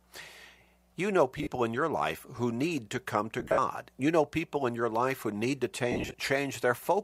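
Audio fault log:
1.39–1.51 s, 3.40–3.58 s, 5.92–6.14 s: lost LE Audio frames. Brief scattered bursts of about 80, 140 and 150 ms went missing. The LC3 decoder refilled each gap with the last spectrum under random signs, so the speech smears into hiss. A spectrogram shows harmonics dissolving into blurred noise bands, and the waveform shows a ragged envelope that dips over the longest run, near 70 ms.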